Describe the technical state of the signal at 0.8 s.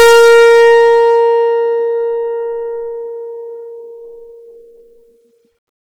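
Hard clipping is active at 0.8 s, part of a span running from the start of the music to about 1.24 s. The signal is pushed roughly 13 dB past what the stage can pass, so every peak is sliced flat instead of following its natural curve. Those squared-off tops generate harmonics high in the spectrum. With this much overdrive the effect is a harsh, buzzy fuzz on every loud moment rather than occasional crackle.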